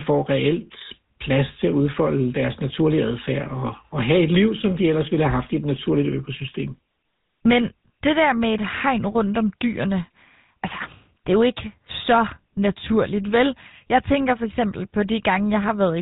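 From start to finish the speech carries GSM full-rate codec coding at 13 kbps: a vocal-tract model driven by sparse regular pulses, bandlimited below 4 kHz, giving a plainly audible buzzy, gravelly roughness.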